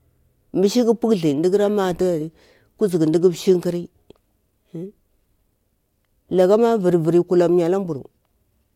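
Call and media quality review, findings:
No audible faults found in this speech recording.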